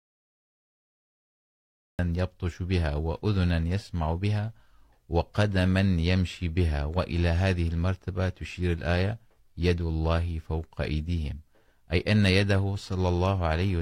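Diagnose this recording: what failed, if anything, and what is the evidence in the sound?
The capture started late, a cut-off start at the recording or buffer stage: the file holds digital silence from 0.0 to 1.99 s, then the speech enters abruptly at 1.99 s, mid-sound, with no natural attack or onset, because the stream joined while the talker was already speaking.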